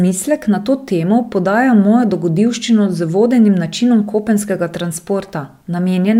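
No technical faults can be heard anywhere in this recording.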